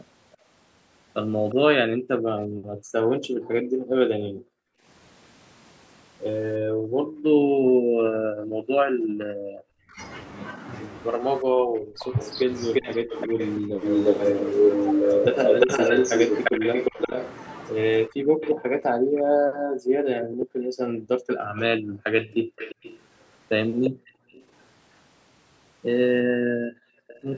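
From 0.32 to 1.55 s, an echo leak adds a quiet copy of the speech trailing by 351 ms, about 20 dB down, likely from a loudspeaker echo the canceller missed. On a spectrogram it shows as faint, shifted duplicate harmonics. Speech suppressed in double talk follows from 0.36 to 4.87 s. The talker dips by up to about 40 dB in pieces, likely because the echo canceller turned down both sides. This recurs from 6.59 to 13.82 s, with a brief echo scrap at 9.03 to 9.07 s. From 12.0 to 24.64 s the 351 ms echo runs at roughly speech level, while suppression chops the speech from 15.66 to 24.5 s. A final dropout at 26.23 to 27.25 s overlaps a faint echo tail from 27.07 s to the end.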